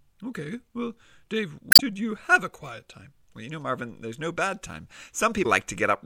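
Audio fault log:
1.69–1.81 s and 5.42–5.46 s: damaged data in a compressed stream, heard as brief glitches (the first just before "you have a quiet") as corrupted frames misdecode before resync.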